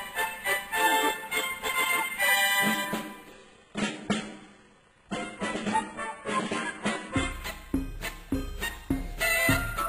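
Adaptive stream at a lower bitrate, from 3.32 s to 7.32 s: for four seconds the stream swaps to a much leaner version, likely because the connection slowed, then swaps back. The switch is abrupt in both directions with no gap. During that stretch everything above 11.1 kHz is gone, the top end turns thin and synthetic, and codec artefacts thicken, a sound that fits a spectral-band-replication codec at a very low bitrate replacing a fuller one.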